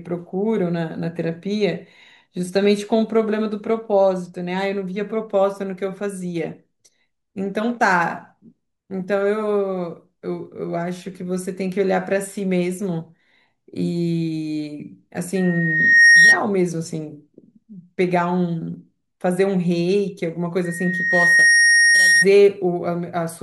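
A single piercing tone at 1.9 kHz swells up from 15.35 s to 16.41 s and again from 20.64 s to 22.25 s, building over roughly 0.7 s the first time and a second the second time and ending well above the speech. This is loudspeaker feedback squeal. The microphone is picking up the loudspeaker it feeds, and at 1.9 kHz the loop gain exceeds one, so that frequency keeps reinforcing itself until the amplifier limits it or the loop is broken.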